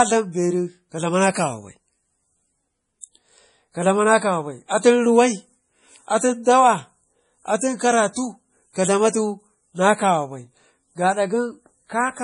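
Throughout the speech, the treble stops abruptly at 10.5 kHz and the sound has a watery, swirling texture with metallic chirps on s sounds. This is heavy MP3 compression, likely at a low bitrate around 32 kbps, where the encoder drops the top band and switches weak frequency lines on and off between frames.

At 3.01 s a pre-echo appears: a short hiss of about 19 ms arrives just before a sharp attack, which sounds softened. The codec spread quantisation noise, sized for the loud onset, across its whole block, so it fills the quiet moment ahead of it.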